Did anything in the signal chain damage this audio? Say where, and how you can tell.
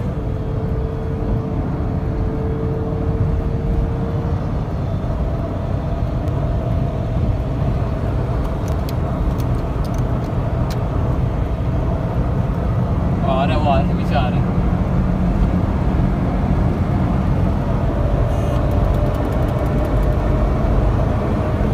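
Yes, at the buffer stage: the sound jumps ahead at 4.32, 6.28, 8.72 and 20.2 s, likely dropped buffers (overrun), each losing 40 to 70 ms.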